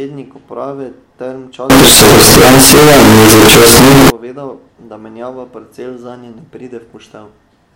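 Speech clip; from 1.70 to 4.10 s, just before "povedal da menjava", it turns into loud, harsh, near-square buzz with noise as loud as speech, likely float read as integer.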